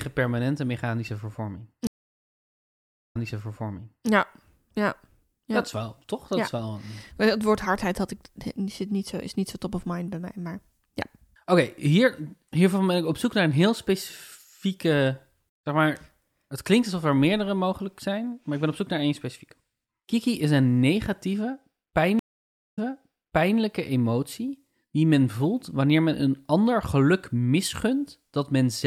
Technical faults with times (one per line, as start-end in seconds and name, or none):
1.87-4.09 stream reconnect
22.19-23.58 stream reconnect